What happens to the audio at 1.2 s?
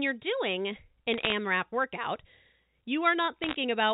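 From 1.14 to 1.32 s, bit errors on a digital phone line flip under one percent of bits, corrupting single samples into clicks and crackle over the speech.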